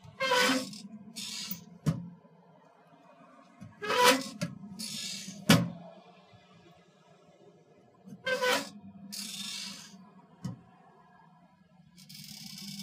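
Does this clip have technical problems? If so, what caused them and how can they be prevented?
Yes. From 0.81 s to the end at 12.82 s, a block size mismatch (truncated) adds a 43.1 Hz buzz: each block loses its tail, which fits 1024-sample blocks, while the tempo stays at 1.0x. Prevent it by matching the block sizes of connected stages.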